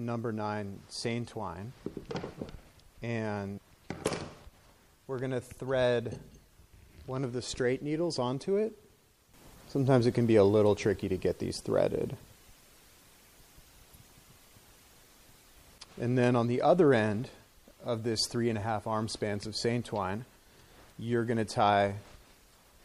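Right from the start the whole clip has a watery, swirly edge with dull, capped treble and smeared attacks, most likely MP3 compression squeezed hard. The encoder seems starved of bits, which fits a low rate around 64 kbps, so faint detail flickers in and out.

Then at 3.54 to 3.59 s and again at 13.91 to 13.96 s there's a short glitch. That's damaged data in the compressed stream: the decoder hits garbled frames, loses sync and jumps to the next header.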